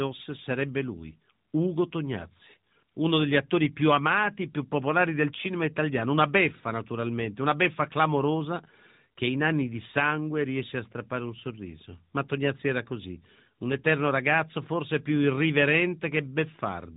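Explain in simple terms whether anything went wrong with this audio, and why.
Nothing went wrong here.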